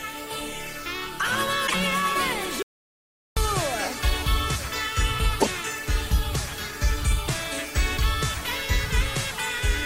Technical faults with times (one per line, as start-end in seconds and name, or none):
1.63-1.74 damaged data in a compressed stream
2.62-3.37 audio dropout to silence
5.37-5.48 damaged data in a compressed stream